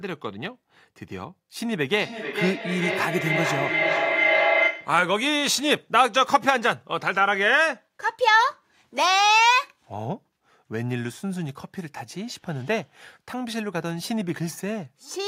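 From 1.77 to 5.12 s a feedback howl builds: the loop between a loudspeaker and a microphone on the same call gains level each pass. It narrows to a tone near 2 kHz, swells to about speech level, and repeats on a loop of about 400 ms. This sets it apart from decaying echo.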